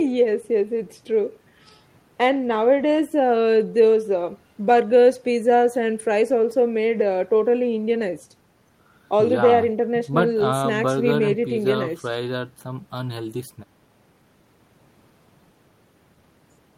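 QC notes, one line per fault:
Nothing to flag on this speech clip; no faults turned up anywhere in it.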